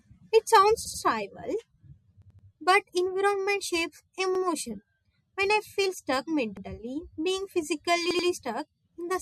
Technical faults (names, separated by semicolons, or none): repeated buffer